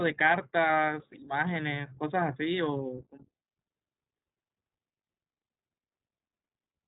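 From start to end the speech sounds boxed-in and slightly rough, with a buzzy, synthetic edge and nothing above about 3.8 kHz. This is the iLBC codec at work: it codes each 20 ms frame's excitation independently at narrowband, which fits a 15.2 kbps mode.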